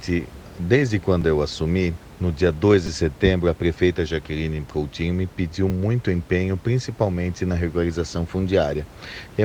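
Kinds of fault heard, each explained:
Repeated buffer: playback ran dry and the device replayed its last 5 ms block, so a tiny slice sounds again with hard joins, heard as brief clicks or buzz in this speech, at 1.22 s before "eu assumi no dia", 2.87 s before "de setembro a prefeita" (three extra plays), and 5.70 s after "me pediu".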